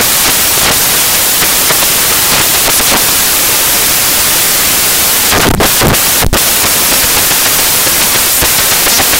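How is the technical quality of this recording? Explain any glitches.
The technical quality is poor: the whole recording suffers from samples built from the wrong bytes. From start to finish, the playback side assembles each sample from its bytes incorrectly, whether shifted by one byte, in swapped order, or under the wrong alignment assumption. The rapidly fluctuating low-order bits end up dominating each value, so the music is buried under loud, harsh broadband noise that is close to white on the loud passages.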